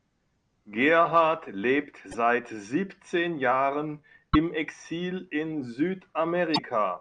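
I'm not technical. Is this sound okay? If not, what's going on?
No, not quite. There are three short glitches in this speech, at about 2.08 to 2.15 seconds, 4.30 to 4.36, and 6.52 to 6.59, each well under a tenth of a second. They're caused by damaged data in a compressed stream: part of the compressed file got garbled, so the player briefly couldn't read that stretch and had to scramble to find its place again. What you hear each time is a quick chirp, squawk, click or short gap.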